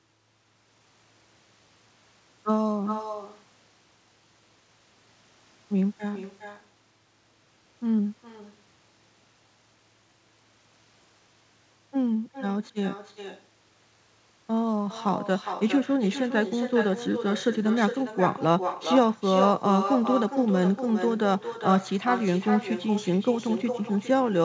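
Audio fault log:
Throughout: echo with no canceller. Every phrase of the speech returns about 0.4 s later, about 8 dB quieter. The far end's loudspeaker feeds its microphone, and nothing removes it. So a thin copy trails the talker, band-limited at 8 kHz like the call.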